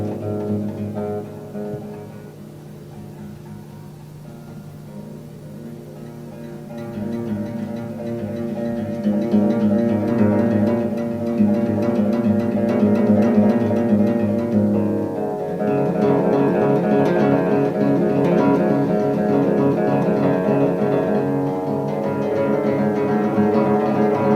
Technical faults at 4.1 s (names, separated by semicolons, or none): call bitrate drop